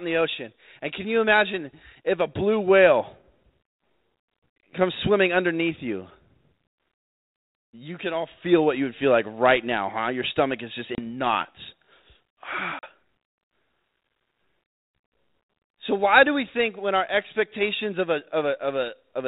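Packet loss on an ADPCM call drops about 30 ms of speech at 10.95 s, right after "stomach is just", and about 40 ms at 12.79 s, each a few packets. Silence fills each hole, leaving the decoder's predictor and step size out of step, so the audio returns with a hard edge and a brief distortion.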